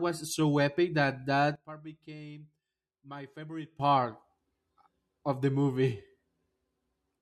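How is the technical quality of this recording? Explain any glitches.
The recording has one fault, a sudden gain jump. At 1.56 s, just after "so epic that", the digital gain was likely switched from one sample to the next without any ramp, lowering the level by about 17 dB until it snapped back at 3.80 s. The speech and the background noise drop and then return together, abruptly.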